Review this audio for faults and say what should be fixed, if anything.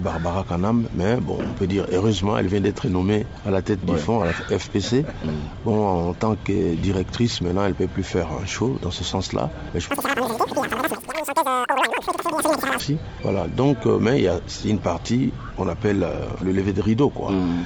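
From 9.91 to 12.80 s the sound races and jumps sharply upward: a wrong sample rate. It plays 2.76 times too fast and about 17.6 semitones high, which fits 16 kHz material played at 44.1 kHz. To prevent it, tag each stream with its true rate and resample to the output rate before playback.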